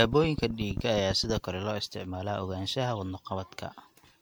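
From the first moment to the end, the speech carries generation loss. It sounds swirly and hollow, and consonant onsets are smeared more than a single 96 kbit/s MP3 encode would account for. The most likely cause is repeated decoding and re-encoding, on the order of seven passes, each one quantising on a shifted frame grid so that noise and spectral holes pile up. Content stops just short of 19.9 kHz.

Between 0.04 and 1.38 s, a train of clicks rides over the audio: around fifteen similar pulses at an average of 10.5 per second, spaced unevenly rather than on a fixed beat. They peak roughly 10 dB above the signal, so they come through as distinct ticking, including in the gaps. Interference from nearby equipment or a faulty connection or power supply is the likely source of the repeated pulses.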